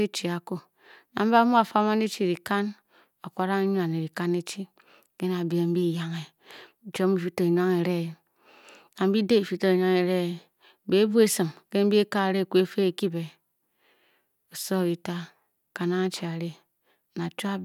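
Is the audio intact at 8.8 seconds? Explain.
Yes, at 8.8 seconds the speech plays through intact, with no dropout, click, distortion or other fault at that moment.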